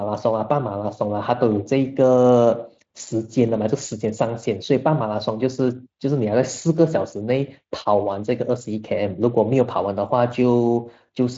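Nothing here counts as a technical fault; the speech arrives by way of Speex at about 24 kbps, which leaves it bandlimited to roughly 7.6 kHz with only light codec colouring.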